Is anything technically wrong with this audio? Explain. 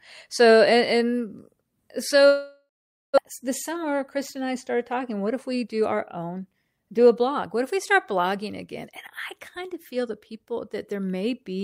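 Yes, there are two faults.

From 2.27 to 3.20 s there is a long network dropout. The audio smears into a fading buzz that settles into silence for the last 450 ms or so. When sound returns it has skipped ahead, with about 600 ms of material gone. The likely cause is that packets stopped arriving for nearly a second. The receiver stretched the last sound to cover the gap, then gave up and went quiet.

From 3.42 to 6.99 s there is a jitter buffer speed-up. The speech runs hurried at about 107% speed, though its pitch stays the same. Delayed audio arrived in a bunch and left the buffer about 300 ms deeper than intended. To pull the delay back down, the receiver repeatedly cut out pitch-period-length slices, trimming roughly 300 ms in total over those three and a half seconds.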